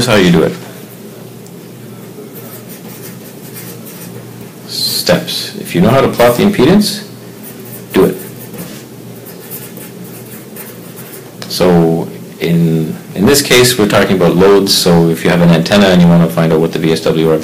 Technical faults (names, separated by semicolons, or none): hard clipping